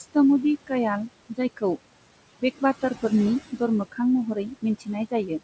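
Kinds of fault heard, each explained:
Noise suppressor artifacts: A frame-by-frame suppressor pulls down whatever bands it judges to be steady background. Here the room noise, sitting about 14 dB under the speech, drops by about 21 dB in the gaps and swells back beneath the speech. Unlike a simple noise gate, which switches everything on and off at once, the change here varies across frequency, so the leftover noise shifts rather than being abruptly chopped.
Speech cut by the noise suppressor: Between 4.35 and 4.88 s the suppressor mistakes parts of the speech itself for noise and turns them down along with the background, by as much as about 19 dB. Only scattered moments are hit, roughly 150 ms in all, so soft consonants and endings there sound swallowed or faint. A dropout or packet loss would instead leave silence or a glitch, and clipping would add harshness. Here the sound just thins and recedes.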